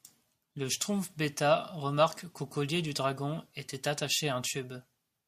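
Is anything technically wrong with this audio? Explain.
No, nothing technically wrong turns up anywhere in this speech recording.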